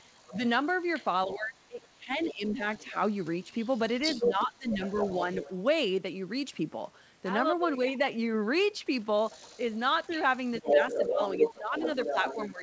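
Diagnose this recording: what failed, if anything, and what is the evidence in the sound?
Other side's voice leaking through, 0.0–5.54 s and 9.29–12.62 s: a second voice, first well under the speech, later as loud, likely echo in call processing.

Speech suppressed in double talk, 0.29–0.41, 1.27–2.96, 4.19–5.49 and 10.71–12.62 s: speech dips roughly 10 to 15 dB, likely the echo canceller ducking both talkers.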